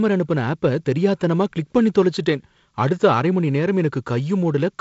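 The speech signal carries no technical faults; it has the bandwidth of G.722 wideband telephone coding, with nothing above about 7.7 kHz and only the light coding hiss and slightly noisier lower band that fit its 48 kbit/s mode.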